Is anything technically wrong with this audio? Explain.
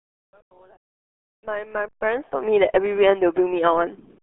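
Yes. The RealAudio 14.4 codec colours the speech from start to finish. Nothing above 3.7 kHz survives, and the band sits roughly inside the telephone range of 300 Hz to 3.4 kHz. The coder keeps only a coarse model of the vocal tract and a crude excitation. That fits a stream of about 8 kbit/s. Consonants lose their edge and vowels turn muffled and gargly. The heavy damage is audible even through the smooth fade-in that runs from the start to 2.54 s.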